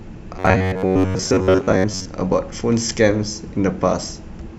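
From 0.34 s to 2.07 s the speech takes on robotic sound from repeated short buffers: a rigid, metallic buzz near 94 Hz, while the outline of the words still comes through roughly. The likely cause is audio arriving too slowly, so playback keeps repeating a fragment of about 10.7 ms, matching the buzz frequency, and skips the real material. The repetition accounts for most of that stretch.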